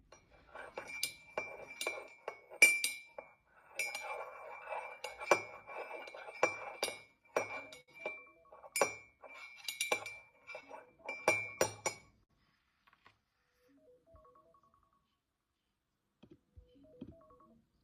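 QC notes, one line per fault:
Throughout: clock drift between sender and receiver. The sending device's clock runs slow, by roughly 4 percent against the receiver's, so audio arrives a little slower than it is played out. The jitter buffer keeps drifting toward empty, and the receiver has to keep adding material to stay in step. That steady mismatch is what drives the recurring timing edits noted below, rather than any fault in the sound itself.
0.08 to 17.72 s: repeated timing corrections. To cover the slow sender, the receiver stretches the stream, playing at about 97 percent speed overall and inserting roughly half a second of extra material across the clip. Each insertion repeats a tiny slice of what came just before, all in the same direction but at uneven spacing. If heard at all, they come across as faint hiccups and a slightly unsteady tempo rather than clear breaks.
7.81 to 7.90 s and 12.24 to 12.31 s: short stall from a late packet. 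In both spots a packet arrived late, with the delay jumping by 70 ms and then 56 ms, and the buffer briefly ran dry. The receiver held the last sound for those 70 ms and 56 ms until data arrived, then resumed where it left off, so nothing is lost. Each stall shows as a sound held a beat too long, with a slight buzzy or dipped quality.
9.86 to 11.06 s: scattered short gaps. About five packets were late or lost one at a time across this stretch, and the receiver patched each hole by extending the preceding sound. The patches total around 50 ms, the longest around 15 ms, covering only a few percent of the span, and no audio is missing. The result is a cluster of tiny ticks and smears over a little more than a second.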